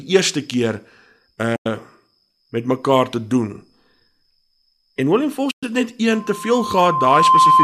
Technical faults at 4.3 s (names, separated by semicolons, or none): none